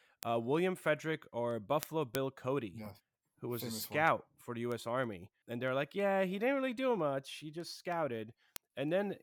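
From 0.23 s to 9.21 s, the speech carries word clock ticks. Sharp clicks recur about every third of a second, around thirty in all. Their strength varies from tick to tick. The cause is a digital link read by a device running on its own clock, not locked to the sender. The two clocks differ by roughly 70 parts per million. At each slip, one sample is dropped or repeated, producing a tick.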